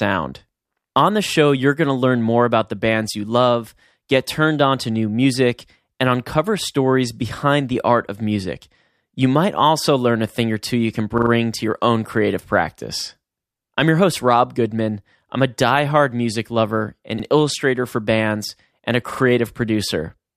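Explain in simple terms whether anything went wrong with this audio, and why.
Repeated buffer at 11.18 s, 17.2 s and 19.12 s: the playback device ran short of fresh audio, so it replayed its last slice of about 43 ms, which fits a 2048-sample buffer. You hear brief stutters as that slice plays three, one and two extra times, with no sound appearing to go missing.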